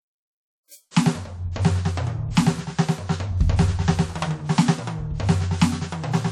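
From the start of the music to the end, the damage is plainly audible: a washy, ringing smear around transients, with a thin hiss that rises and falls with the level, and no content above about 18.9 kHz. This is likely WMA compression at a low bitrate, consistent with roughly 48 kbps. Its long transform blocks spread quantisation noise over tens of milliseconds, and quieter spectral detail has been discarded outright.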